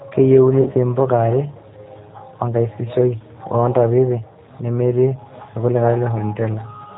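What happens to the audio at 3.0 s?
At 3.0 s, as throughout, the speech carries G.729 codec damage. It is rebuilt from a filter and sparse pulses, so it sounds rough, synthetic and capped at 4 kHz.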